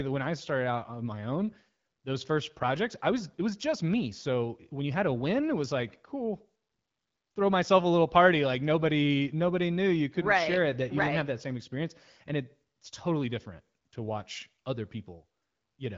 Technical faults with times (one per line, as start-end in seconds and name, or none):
none